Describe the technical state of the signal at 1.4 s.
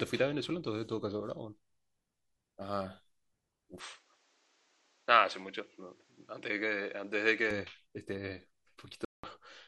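At 1.4 s the signal is intact, with no audible fault at that point.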